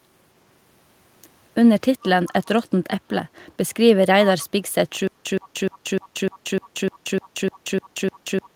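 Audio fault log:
2.26, 5.42, 5.73, 6.02, 6.32 and 7.22 s, echo leak: a far-end echo canceller likely let part of its loudspeaker pickup back into the line, so brief scraps of the sound return 385 ms late, faint at roughly 25 to 30 dB below the main level.
5.07 s to end, stutter with silent gaps: playback likely stalled and, on each retry, repeated its last 120 ms fragment, then ran dry for 181 ms of digital silence. The same burst recurs every 301 ms, and the intended audio is lost.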